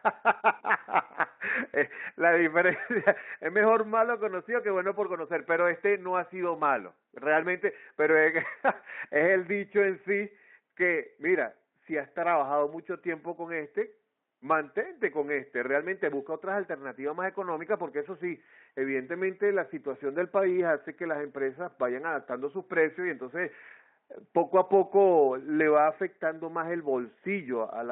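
No technical faults are audible anywhere in this speech.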